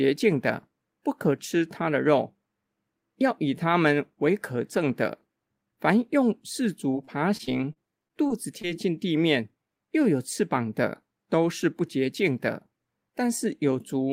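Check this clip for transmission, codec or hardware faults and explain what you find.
There's one transmission fault: repeated packet loss (robotic sound) from 6.91 to 8.75 s. Packets kept dropping, and each hole, none longer than 32 ms, was patched by stretching the previous sound, roughly 150 ms of filler in total. That leaves the speech choppy and robotic.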